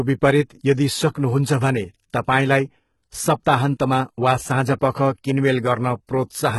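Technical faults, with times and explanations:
Throughout, HE-AAC compression: nothing above 11.8 kHz, and s sounds are heavily gritty and metallic, likely from treble rebuilt by band replication at a bitrate near 16 kbps.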